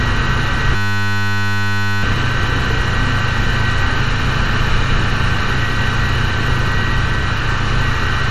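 A recording of everyday sounds, and at 0.76 s it locks into a system hang loop that runs until 2.03 s. What you hear is a flat, steady buzz at 100 Hz, because one 10 ms slice of audio repeats exactly, over and over. That's the sound hardware still cycling its ring buffer after the machine or driver stalled, which fits a very short buffer. When it recovers, about a second and a half of real audio is just gone.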